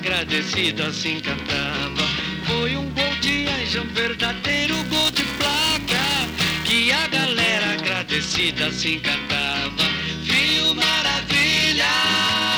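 From 4.73 to 6.72 s a robotic buzz at 375 Hz rides on the sound, which fits a 128-sample buffer: this is buffer tearing. Writer and reader of the ring buffer have slipped into crossing each period, so a small slice of every buffer replays audio about ten milliseconds old, hard-joined at both edges. A spectrogram shows evenly spaced harmonic lines at 375 Hz multiples only where signal is present; the waveform shows regular step discontinuities.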